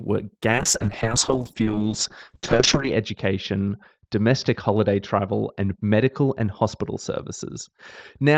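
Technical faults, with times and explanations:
0.51–8.37 s, call bitrate drop: the bandwidth estimate fell and the encoder coded far more coarsely, consistent with a slide from about 32 to 7 kbps. The top end shrinks from 20 kHz to 8 kHz, so the speech turns muffled and rough, worst for about 2.4 s, without recovering.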